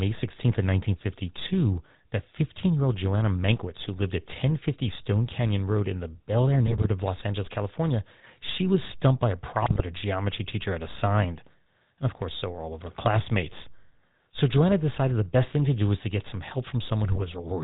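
GSM full-rate codec coding runs throughout: the speech is rebuilt from a vocal-tract model with sparse pulse excitation, giving a buzzy, gravelly roughness and nothing above 4 kHz, consistent with a 13 kbps full-rate stream. GSM bit errors strike at 6.67–6.86 s, 9.62–9.81 s and 17.12–17.28 s: corrupted filter, pitch and gain values distort frames, and the voice breaks into squawks, pops and gargling.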